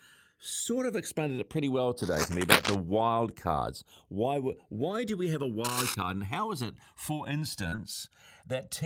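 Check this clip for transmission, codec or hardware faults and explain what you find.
Four faults are present: a slow stereo drift throughout, two bursts of contact noise, and a short dropout near the end that was concealed and partly rebuilt.

Channels drifting apart runs the whole length. The two channels seem to sit on clocks a few hundred parts per million apart, so their offset grows to about 1.5 ms. Summed to mono, this gives slow flanging, which appears on a spectrogram as comb notches sliding steadily through the spectrum.

Cable scratch noise appears from 1.99 to 2.76 s, about 5 dB above the speech, and from 5.64 to 5.95 s, roughly level with it. The likely cause is a worn cable or connector being moved, with its contact resistance jumping rapidly. It sounds like rustling scratches. The waveform shows dense, ragged spikes, and the spectrogram shows broadband speckle.

Short concealed packet loss occurs from 7.69 to 7.74 s. 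About 20 ms of audio never arrived in time, and the receiver extended the preceding sound over 25 ms before blending back into the real signal. It is heard as a brief smear or wobble. On a spectrogram, the harmonics or noise look stretched and repetitive.

A lost packet rebuilt from error correction overlaps the end of that gap, from 7.72 to 7.74 s. The 20 ms span fits a single packet recovered from the low-bitrate copy carried in the next one. That stretch sounds rougher and noisier.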